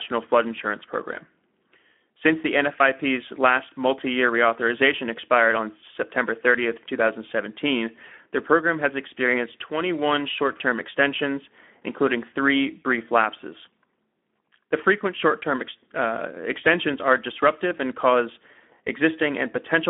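Speex coding at around 11 kbps, a narrowband CELP speech codec, starves the excitation of bits throughout, so the speech sounds noisy and hoarse, confined to roughly 250 Hz to 3.5 kHz with nothing above 3.8 kHz.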